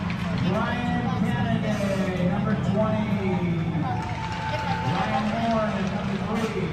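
No faults are audible anywhere in the audio.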